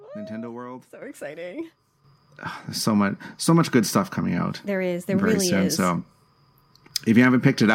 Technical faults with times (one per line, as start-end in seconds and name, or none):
1.02 microphone volume stepped up
2.04 microphone volume stepped up
4.98 microphone volume stepped up